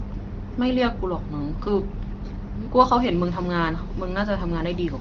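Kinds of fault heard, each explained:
No faults can be heard in this speech. It comes through the AMR wideband (HD Voice) codec at what sounds like about 18 kbit/s, so the speech stays clear, and as expected of that path there is nothing above roughly 7.3 kHz.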